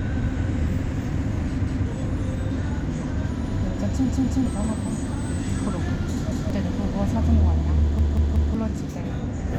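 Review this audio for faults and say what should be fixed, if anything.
A repeated buffer fault occurs four times, at 1.67 s, 4.09 s, 6.32 s and 7.99 s. Each time, a chunk of about 186 ms plays again with a hard join, heard as a stutter in the sound. That length fits an 8192-sample buffer. The first and third events repeat once. The second repeats twice. The last repeats three times, ending near 8.55 s. New audio arrived late, so the device replayed its last block. About a fifth to half a second of sound is lost each time.

To fix it, keep the audio feed well ahead of playback by enlarging the output queue or giving the audio thread higher priority.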